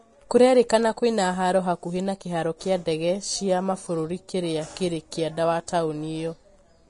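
Vorbis compression, throughout: the speech sounds grainy and hissy, with nothing above 10.6 kHz, likely from low-bitrate coding that points to around 33 kbps and turns treble detail into noise. Pre-echo, at 0.69 s: a brief hiss of about 12 ms leads into a sharp onset, because quantisation noise spread across the coding block spills ahead of the attack.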